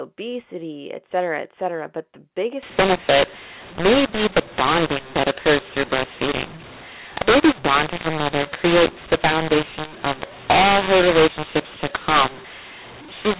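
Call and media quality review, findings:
mu-law and A-law mixed up, 2.63 s to end (13.39 s): speech harsh and distorted, levels scrambled, pauses hiss. Probable G.711 decoder expanding A-law bytes with the mu-law curve. Unlike clipping, quiet gaps fill with noise; the 4 kHz telephone band stays intact.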